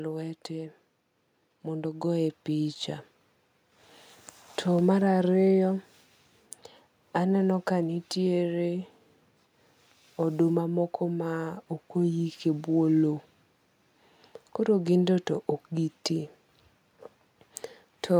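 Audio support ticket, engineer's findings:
Automatic gain rising, 0.47–2.87 s: AGC ramps gain up about 7 dB over 2.4 s; background noise swells with speech, unlike a talker moving closer.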